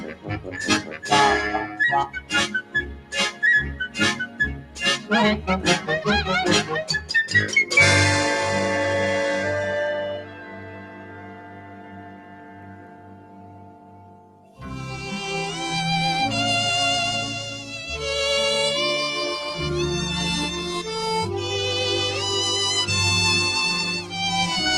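A noise suppressor applied to music or sounds runs through the whole clip. It was built for speech, so it treats sustained tones and decays as noise. Level swings by around 10 dB. Attacks pass, but the sound pumps and thins.

Sound cut by the noise suppressor comes at 0.00–0.56, 0.81–1.06, 2.07–2.32, 2.62–3.13, 4.22–4.78 and 10.05–14.62 s. Drops reach about 11 dB, or about 9 dB at 4.22 s. Held sound sinks and tails end early. The last cut lasts several seconds.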